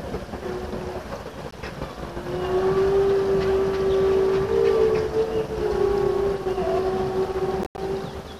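At 1.51 s the sound drops out for about 15 ms, then again from 7.63 to 7.78 s, where roughly 116 ms goes missing in several gaps spread over 145 ms, the longest lasting 87 ms. This pattern is likely a Bluetooth dropout: packets arriving too late to the headphones were discarded, leaving silence. Unlike an edit or buffer underrun, the audio resumes further along, as though it had kept playing, with no stutter or repeat.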